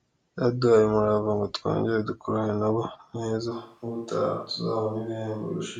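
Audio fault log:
3.53 s to the end: switch to a distant microphone. The voice abruptly turns roomy and hollow, drops about 5 dB in level and loses low-end body, while a faint room background appears roughly 40 dB below the speech. The likely cause is that the close microphone's feed dropped out and the recording fell back to a microphone farther away, which picks up more reflections and ambient noise relative to the direct sound.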